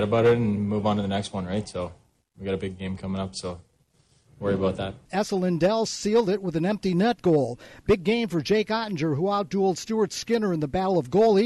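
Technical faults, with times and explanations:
No technical faults can be heard in this clip.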